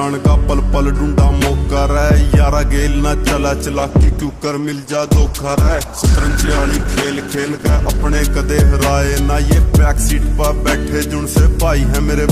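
A call bitrate drop runs from 3.73 s to 8.27 s: the bandwidth estimate fell and the encoder was pushed down to a much leaner bit budget, sitting at its lowest for about 4.5 s. The audio turns coarse and muffled over that stretch, with rough, watery detail and the top end cut away, which fits a fall from around 64 kbps to about 12 kbps. Full clarity returns once the bitrate recovers.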